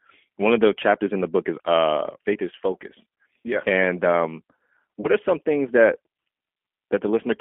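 Throughout this speech recording the sound is thin, slightly rough and synthetic, confined to a band from about 250 Hz to 3.4 kHz with audible coding damage. That points to the G.729 codec at around 8 kbit/s, which rebuilds speech from a vocal tract model, a pitch predictor and a few pulses per frame. From 5.00 to 5.09 s, just before "are some things that", the sound smears into a brief, fading stretch. This is VoIP packet loss concealed by the speech codec. About 30 ms went missing, which fits a single lost packet, and the decoder filled the gap by extending its last pitch and filter at falling gain. Because each frame builds on the one before, the voice stays weakened a little beyond the gap.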